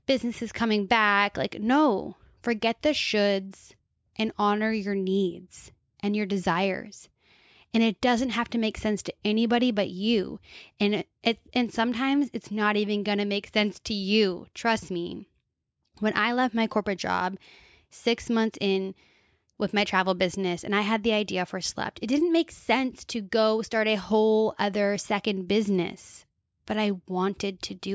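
A speech recording with no technical faults to report. Nothing in it calls for a time, a value or a cause.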